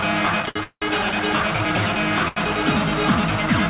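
The audio has come through a call link, band-limited with nothing above 4 kHz, which fits a G.711 A-law codec. From 0.42 to 0.84 s there's a stutter from repeated stalls. The jitter buffer kept running dry as packets showed up late, so the receiver stretched the last sound four times, about 0.28 s in total with the longest hold around 0.18 s. That's roughly two-thirds of that stretch being filler, though nothing actually goes missing; it just drags. Then at 2.28 s there's a short stall from a late packet. One packet wasn't there in time, so the sound gets held for 83 ms until it arrives at 2.38 s and playback picks up where it left off, giving a brief smeared sustain with a slight buzz or dip.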